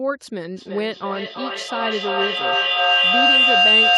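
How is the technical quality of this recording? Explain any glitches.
The technical quality is poor because of one serious fault. From 0.56 s to the end of the clip, a piercing tone near 3 kHz swells until it sits about 10 dB above the speech, throbbing roughly every third of a second. This is feedback howl: two devices in the room share the call, so sound circles from loudspeaker to microphone, gaining level each pass and narrowing onto one favoured pitch.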